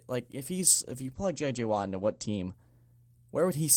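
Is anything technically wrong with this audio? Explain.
Yes. A call bitrate drop runs from 0.58 s to 3.69 s, starting just after "like if". The connection's bandwidth estimate fell, so the encoder had far fewer bits to spend. The sound points to a fall from about 40 kbps to about 12 kbps, with the lowest rate lasting about 1.55 s. At that rate the codec codes the speech coarsely and narrows its band from 20 kHz to 8 kHz. The speech turns muffled and rough.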